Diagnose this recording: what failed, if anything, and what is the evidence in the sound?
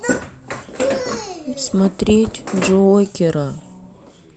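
Nothing failed: no stage of this recording shows a fault, and there is no evidence of one in the sound.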